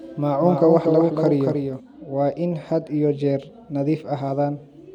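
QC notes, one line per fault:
0.0–1.8 s, doubled audio track: the same speech is likely being mixed in a second time through a slower path, so a full-band copy trails the original by about a fifth of a second at a few decibels lower. It is already present when the clip opens and gives a flat, dry echo with no room decay, every syllable heard twice. The copy then stops abruptly just before "waa in had iyo".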